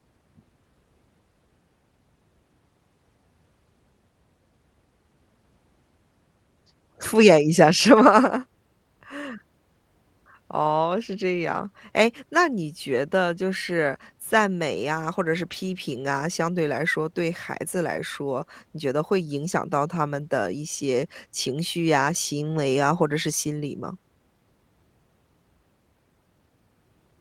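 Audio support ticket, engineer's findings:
Lost packet rebuilt from error correction, four events: 15.51, 17.95, 19.93, 22.97 s. Each about 20 ms of rougher, noisier speech. No gap, no dropout. Fits one lost 20 ms Opus frame each time. Probable component: network path, recovered by Opus in-band FEC at decoder. The following packet carried a low-bitrate copy, which was played in place of the lost frame. Brief coarse texture results.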